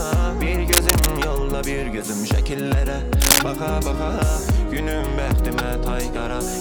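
At 0.72 to 1.07 s, and again at 3.22 to 3.39 s, dense, ragged bursts of cable scratch noise cut across the audio. The first is roughly as loud as the sound itself, the second somewhat louder. This is likely a worn cable or connector being moved, its contact resistance fluctuating. On a waveform these show as jagged, irregular spikes. On a spectrogram they appear as broadband, speckled vertical smears.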